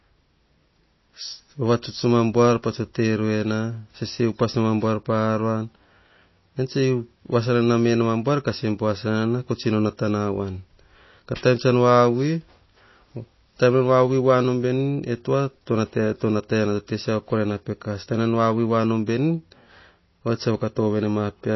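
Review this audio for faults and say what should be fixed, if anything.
Throughout the speech the sound is plainly watery and swirly, with metallic chirps on s sounds and nothing above 5.8 kHz. That points to MP3 compression, likely at a bitrate around 24 kbps, where the encoder cuts the treble and zeroes weak frequency lines frame by frame. To prevent it, encode at a much higher bitrate or deliver the original uncompressed recording.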